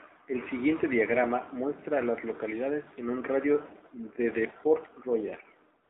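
From start to finish the speech sounds boxed-in and buzzy. Nothing reaches below about 250 Hz or above 3.7 kHz, and the plainly audible damage has a synthetic, reedy edge on the voice. This is the AMR narrowband mobile codec at work. It rebuilds the voice from a compact vocal-tract model excited by a few pulses per 5 ms subframe, and the degree of roughness points to a low mode of around 7.4 kbps.

At 5.84 s, for the final 65 ms up to 5.90 s, the sound gives way to a smooth, even hiss that switches in abruptly, with none of the texture of a real background. This is AMR comfort noise. The sending side decided the talker had stopped and ceased sending speech frames. The receiving side then filled the gap with synthetic noise shaped only from a rough estimate of the background's level and spectrum.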